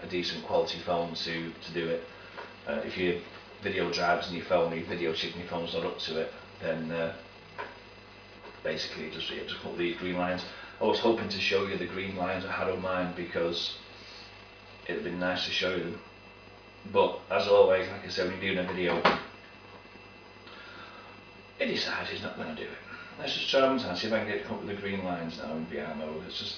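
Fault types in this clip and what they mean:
No faults found: the audio has no dropouts, clipping, glitches or other transport or processing defects anywhere.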